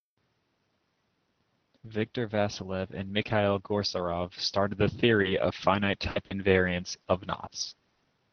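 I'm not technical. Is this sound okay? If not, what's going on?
No. From 5.22 to 7.05 s and again from 7.69 to 8.06 s, the call kept dropping small chunks of audio, up to 60 ms each. This is repeated packet loss: each hole gets patched with leftover sound, so the speech turns choppy and robotic.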